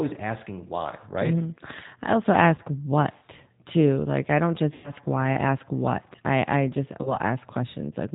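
This is speech carried over a narrowband VoIP link. Throughout, the audio is dull and slightly rough and synthetic, with nothing above 4 kHz. This fits G.729 codec damage at 8 kbit/s, plainly audible, where each 10 ms frame is rebuilt from a vocal tract filter, pitch predictor and a few pulses. VoIP packet loss concealed by the speech codec breaks in three times. From 2.56 to 2.61 s, after "I also" and before "what too", a brief smear fits one lost 20 ms packet. From 4.74 to 4.92 s, after "I don't" and before "why I ask what", the sound stretches and fades. That fits about 100 ms lost, five packets in a row. From 7.03 to 7.18 s, after "what I I just", another single 20 ms gap is bridged. Each time the decoder repeats its last pitch and filter at falling gain. Recovery lags, so the audio stays weak or distorted after packets return.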